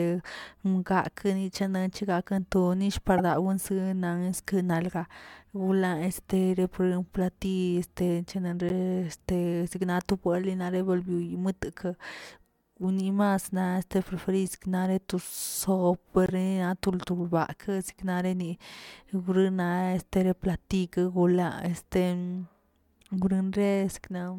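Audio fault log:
3.18–3.20 s, 8.69–8.71 s (just before "te signato") and 16.26–16.30 s, corrupt frame decoded: three brief glitches, each matching one or two damaged compressed frames that the decoder played anyway. Misread gains and codes drop energy at wrong frequencies, peaking around -10, -20 and -15 dBFS. A spectrogram shows narrow vertical smears or stray tonal patches lying outside the speech harmonics.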